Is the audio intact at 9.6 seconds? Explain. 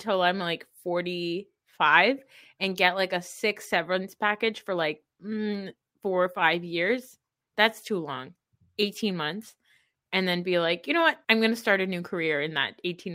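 Yes, the speech is intact at 9.6 seconds, with no audible fault at that moment.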